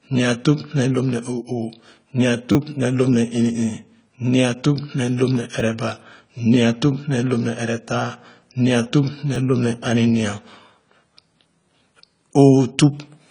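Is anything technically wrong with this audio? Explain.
Yes, there are two problems.

AAC compression, throughout: nothing is present above about 10.1 kHz, and the audio sounds dull and smeared with a fizzy, warbling edge on sibilants. The likely cause is coarse quantisation at a low bitrate, which fits AAC-LC at around 24 kbps.

Repeated buffer, at 2.52 to 2.55 s, 5.60 s and 9.35 s (just after "nua tup ne"): when fresh audio arrives late, the last short block plays again with hard joins. The first event repeats three extra times and drops about 30 ms, giving a brief buzz. The other two repeat once and are heard as clicks. All three fit a 10 ms buffer.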